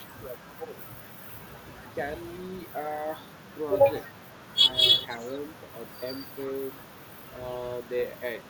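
From 0.06 to 0.77 s, speech is suppressed in double talk: with both sides likely talking at once, the echo canceller treated the talker as loudspeaker echo and turned the line down. The speech dips by about 15 dB for roughly half a second in total.

From 5.09 to 5.39 s comes an echo leak, likely from a far-end echo canceller failing to fully remove its loudspeaker pickup. A faint copy of the speech returns 321 ms late, around 30 dB below the direct sound.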